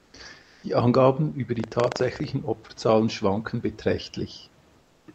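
Comfort noise in place of the background fills three pauses in this speech recording, at 0.00–0.13 s, 0.41–0.63 s and 4.79–5.07 s. The real room hiss, sitting about 38–39 dB under the loudest speech, turns into a flat synthetic wash that shifts level by about −2, +2 and −4 dB. This is likely Opus discontinuous transmission stopping between utterances. Buffer tearing runs from 1.52 to 2.34 s as a 25 Hz robotic rattle under the speech. The writer and reader of the playback ring buffer have slipped, so a small slice of each period, roughly 4 percent, replays audio about a tenth of a second old, with hard joins on both sides.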